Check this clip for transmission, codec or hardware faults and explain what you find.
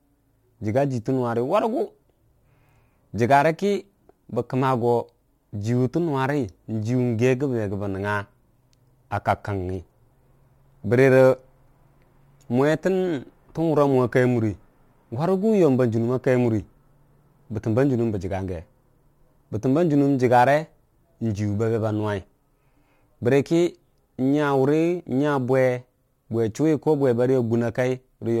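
One fault runs through the whole speech clip: crude rate conversion. A gritty, faintly metallic fizz rides on the voice, strongest on loud syllables and sibilants, with tones that bear no relation to the speech. The sample rate was changed by picking the nearest sample instead of filtering, which fits a conversion from 44.1 kHz to 48 kHz. Samples get repeated in a fixed cycle, and that cycle adds inharmonic error products sitting roughly 35 dB below the speech.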